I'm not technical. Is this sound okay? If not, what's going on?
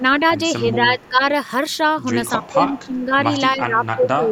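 No. There are two problems. The first is speech suppressed in double talk. The voice gets quieter in patches: 0 to 0.36 s, 0.61 to 1.25 s, 2.36 to 3.24 s, and 3.53 s to the end. The early dips are slight. Later ones are deeper. The likely cause is the call system turning this voice down while the other person talked too.

The second is echo leak. Faint, brief scraps of the voice come back about 0.28 s late. You hear them at 0.99 to 1.09 s, 2.44 to 2.51 s and 2.75 to 2.86 s. Likely, a loudspeaker's sound reached a microphone and wasn't fully removed.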